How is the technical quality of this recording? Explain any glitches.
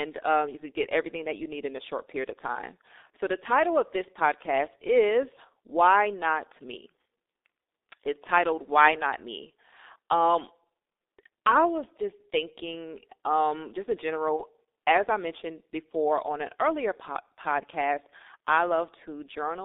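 The technical quality is poor: heavy low-bitrate codec damage runs through the entire speech recording, and one brief dropout occurs near the end.

G.723.1 codec, throughout: The speech is confined to roughly 250 Hz to 3.7 kHz, and the coarse coding points to a rate of about 6.3 kbit/s. This codec models the voice in 30 ms frames and updates that model slowly, so fast changes get smeared. The result is a muffled, hoarse quality with blurred consonants and nothing bright above the band edge.

VoIP packet loss concealed by the speech codec, 14.36 to 14.44 s: A packet went missing, and the gap fits a single lost 30 ms frame. The decoder filled it by repeating its last pitch and vocal-tract filter at falling gain. Because each following frame builds on that guess, the disturbance lasts about 80 ms rather than 30. It sounds like a short buzzy smear that fades and leaves the speech briefly weak before it recovers.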